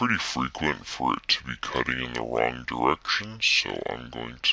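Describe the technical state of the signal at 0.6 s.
Wrong sample rate at 0.6 s, as throughout: the samples play back slower than they were captured, which fits 24 kHz material run at 16 kHz. Speed drops to about two-thirds and pitch falls about 7 semitones together, making the sound low and sluggish.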